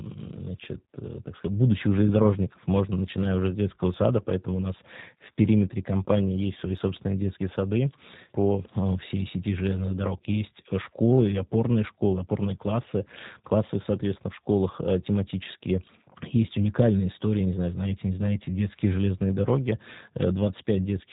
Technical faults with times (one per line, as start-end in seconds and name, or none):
0.00-21.13 G.729 codec